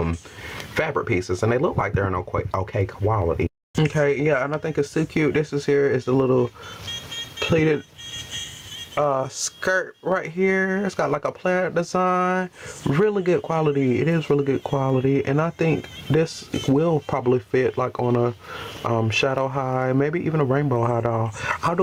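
Gain pumping runs through the whole clip. Each loud sound pulls the level sharply down, and the level swells back up afterward, a rise and fall of roughly 25 dB. The likely cause is input gain set far too high, with a fast limiter or compressor clamping every peak. The sound is squashed and breathing. The waveform shows flattened, uniform peaks, and on a spectrogram the noise floor brightens between loud events and darkens beneath them.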